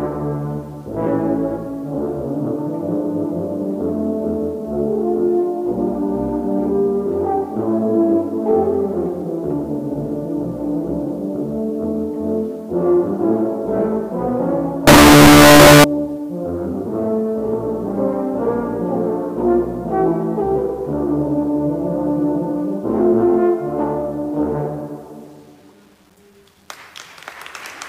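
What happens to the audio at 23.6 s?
Nothing goes wrong at 23.6 s; the audio plays through intact.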